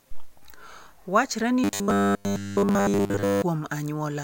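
From 1.64 to 3.42 s the speech turns into a rigid metallic buzz pinned at 100 Hz, loosely following the words throughout. That's likely robotic sound from repeated short buffers: audio arrives too seldom, so a 10 ms slice gets replayed while fresh audio is skipped.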